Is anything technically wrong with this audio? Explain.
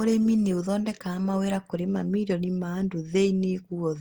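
No, nothing technically wrong can be heard anywhere in this speech recording.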